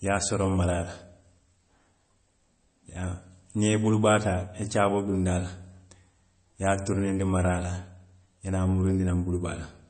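From start to finish the speech carries plainly audible damage that's most likely MP3 compression, and the squeeze fits a low bitrate of about 32 kbps. The encoder ran short of bits, so it chopped off the treble entirely, with nothing above 8.3 kHz, and threw away the quieter frequency detail it judged unimportant. That leaves the speech dull at the top and thinned-out, with a coarse, processed edge that sits over the whole recording.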